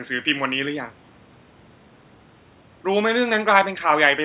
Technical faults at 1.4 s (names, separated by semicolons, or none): none